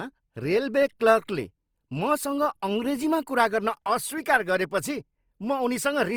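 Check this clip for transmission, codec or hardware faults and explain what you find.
One fault runs through the entire recording.

From start to finish the speech sounds grainy and rough, with a noisy, hissy texture over voiced sounds. This is consistent with likely Opus compression in its music mode at a low rate, around 24 kbps. The encoder preserves each band's overall energy but fills bit-starved bands with folded or noise-like content, so few gaps appear. On a spectrogram, harmonics smear into speckled noise while energy still extends up to about 20.4 kHz.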